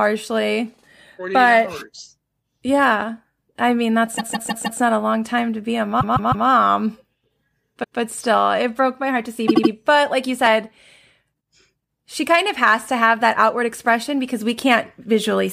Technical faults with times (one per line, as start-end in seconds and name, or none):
4.17-4.79 repeated frames
6.00-6.47 repeated frames
7.83-7.98 repeated frames
9.47-9.71 repeated frames